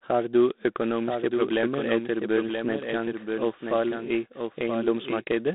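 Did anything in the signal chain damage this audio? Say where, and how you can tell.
Yes. A doubled audio track runs throughout: a full-band second copy of the speech trails by roughly a second, about 5 dB quieter, with no reverb tail. On a spectrogram every syllable pattern reappears about 1 s later, dimmer. The likely cause is a second, slower capture path or an out-of-step edit.

The codec stage applied G.726 ADPCM at 24 kbit/s. With so few bits per sample, each predicted difference is coarse, leaving a harsh, rasping hiss that rises and falls with the speech. The line band runs from about 200 Hz to 3.7 kHz. A spectrogram shows a hard ceiling near 3.9 kHz and noise smearing between the harmonics.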